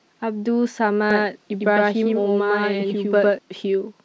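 From 1.11 s to 3.39 s there is a doubled audio track, likely from the speech being captured a second time through a slower path. A dry, full-band copy trails about a tenth of a second behind at roughly equal loudness and starts and stops abruptly.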